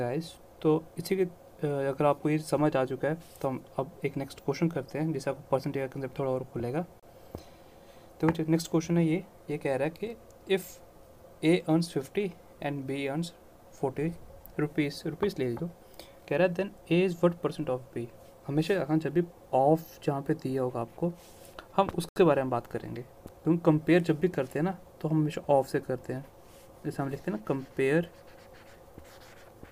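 At 7.00–7.03 s the sound cuts to silence for 30 ms, and at 22.09–22.16 s for 73 ms, then resumes. These are likely a Bluetooth stall: delayed packets emptied the headphone buffer. Unlike a click, nothing is added; playback simply pauses.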